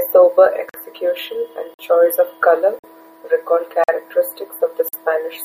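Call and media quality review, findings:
Gap between chunks, five holes of about 48 ms each at 0.69, 1.74 (right before "choice of colour recall"), 2.79 (after "and choice of colour"), 3.84 (after "choice of colour recall") and 4.89 s. They repeat after every 1.0 s of sound, so it's chunked delivery. Looks like codec padding or the player starting each chunk a bit late. Nothing's missing, it just stutters at each join.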